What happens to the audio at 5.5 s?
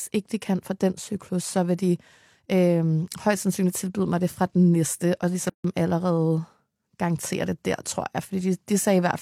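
At 5.50 s the speech drops out for about 150 ms, until 5.64 s, right after "fra den næste og", then resumes with "allerede garantere det der". This is a gap at a join of encoded pieces: separately encoded segments were butted together with their encoder start delay and final-frame padding left in. On a waveform it shows as a flat, near-silent stretch with abrupt, slightly smeared edges. A spectrogram shows a clean vertical band with nothing in it.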